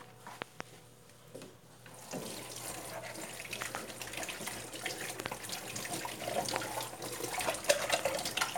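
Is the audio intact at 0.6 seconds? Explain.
No, a loud pop spans 0.42 to 0.63 s, so 0.6 s falls inside it. A sudden voltage step or spike, likely from a plug, switch, static discharge or driver glitch, was added on top of the signal, and the circuitry after it shaped that pulse. Two sharp pops or thumps in quick succession are heard, peaking about 25 dB above the sound, which continues underneath.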